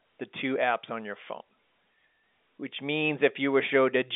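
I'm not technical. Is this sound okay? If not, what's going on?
Yes, nothing stood out on listening, and the speech has the narrower, slightly boxy sound of an ordinary landline telephone call, which is simply how the telephone system carries sound.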